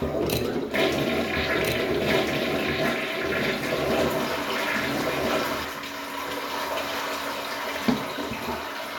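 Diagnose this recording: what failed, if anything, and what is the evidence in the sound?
A doubled audio track runs from 1.35 to 5.65 s. A second, full-band copy about as loud as the original trails it by roughly one and a half seconds, likely from an editing or storage-stage overlap. Unlike echo or reverb, it has no decay or room colour and starts and stops abruptly.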